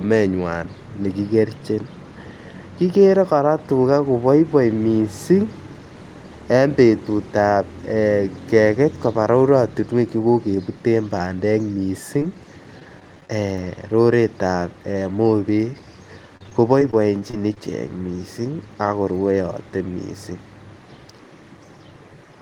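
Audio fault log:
12.2 s: short concealed packet loss. About 10 ms of audio arrived too late, and the decoder bridged the hole by extending the preceding sound, leaving a brief smear.
12.80–13.58 s: repeated packet loss (robotic sound). Seven small gaps, the longest 14 ms, were each patched by continuing the last sound, giving choppy speech with pieces missing.
16.37–17.61 s: repeated packet loss (robotic sound). Eight gaps up to 32 ms concealed about 13% of this stretch, so the speech turns choppier than before.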